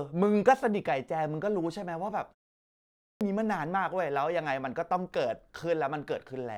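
At 2.61 s, after a pause of about 0.35 s, the speech comes back with a clipped start after a pause. The output device has gone idle during the short silence and takes time to wake and lock again, so roughly 0.6 s of sound, from 2.61 to 3.21 s, is swallowed. The speech resumes abruptly out of silence, with its opening sounds missing.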